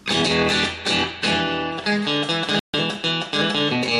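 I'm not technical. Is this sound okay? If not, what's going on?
No. At 2.59 s the sound abruptly goes silent, then returns at 2.74 s. This is a digital broadcast dropout: the receiver briefly lost clean data and muted itself, so about 0.14 s of what was sent is gone for good.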